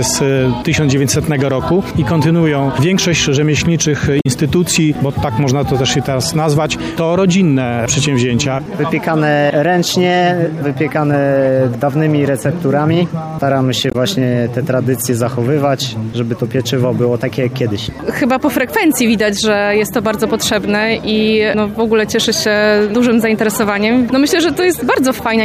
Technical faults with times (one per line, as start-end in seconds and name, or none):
4.19-4.26 damaged data in a compressed stream
13.90-13.95 damaged data in a compressed stream